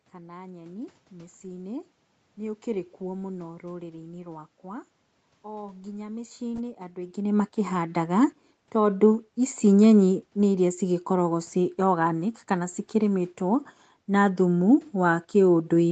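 No technical faults: the speech tops out at 8 kHz as expected for a wideband call path, the background noise belongs to the room, and the level change near 7 s is the talker shifting relative to the microphone.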